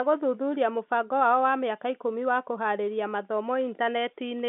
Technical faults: none

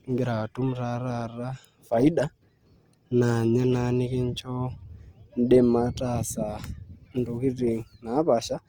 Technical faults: Opus compression

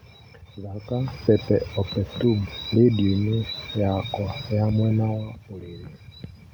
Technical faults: none

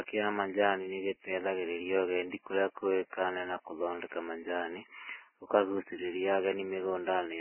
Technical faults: Vorbis compression

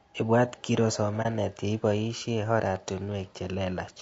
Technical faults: low-delay AAC compression; AAC frame loss with muting

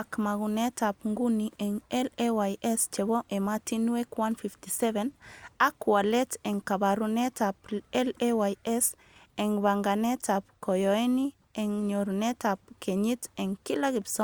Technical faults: none

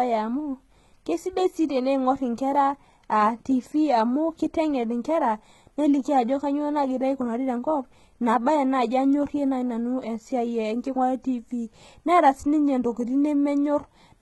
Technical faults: HE-AAC compression

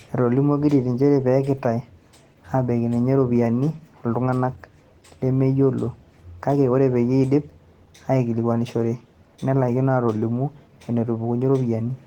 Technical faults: Opus voice compression

